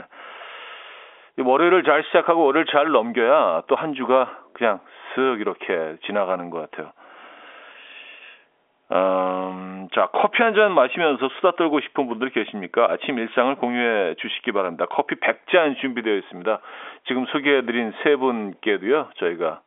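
Nothing stood out on listening to this speech, which comes through a narrow telephone band with no audible content above about 3.7 kHz.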